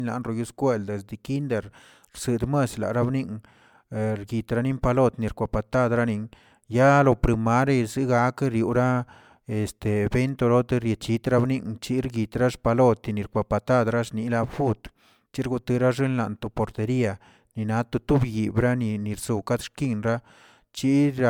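From start to finish the speech carries generation loss: a swirl and hollowness, with consonant attacks smeared, though content reaches up to 20.1 kHz. That combination sets it apart from a single low-bitrate encode, which would cut the top band much lower. Here the cause is likely repeated MP3 encoding, about three passes at rates near 145 kbit/s, each re-quantising on a shifted frame grid so small errors stack.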